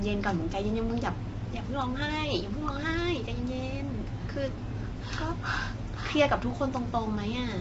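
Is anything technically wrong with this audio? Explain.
Yes. Throughout the speech, likely low-delay AAC compression at a rate fitting about 24 kbps. Its short frames resolve harmonics poorly, leaving plainly audible grainy roughness and nothing above 7.8 kHz.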